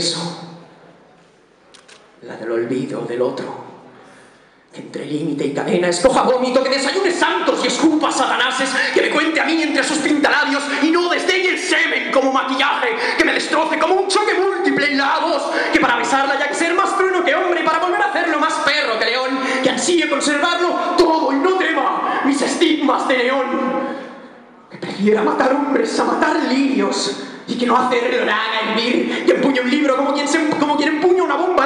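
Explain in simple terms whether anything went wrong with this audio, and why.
Nothing went wrong here; no fault can be heard anywhere in the recording.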